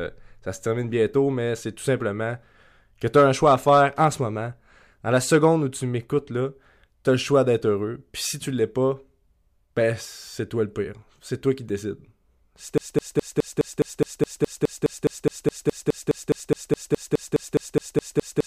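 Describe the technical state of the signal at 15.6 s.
A fragment of speech about 0.21 s long repeats exactly, back to back, from 12.78 s to the end, so 15.6 s falls inside this broken-record loop. It is likely a stalled player or stream resending its last buffer, and the speech that should play here is lost.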